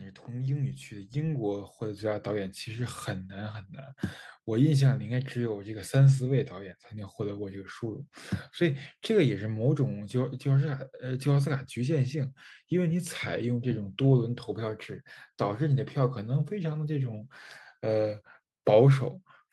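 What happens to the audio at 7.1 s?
At 7.1 s the speech and the background noise are still swelling together, the tail of a slow rise from 0.26 to 8.15 s. This is automatic gain rising: the gain control judged the input too quiet and ramped its gain up by about 10 dB.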